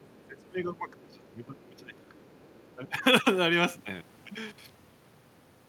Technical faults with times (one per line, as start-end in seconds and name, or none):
0.01-0.41 other side's voice leaking through
0.15-2.26 speech suppressed in double talk
0.98-1.15 other side's voice leaking through
2.15-2.72 other side's voice leaking through
2.75-3.04 speech suppressed in double talk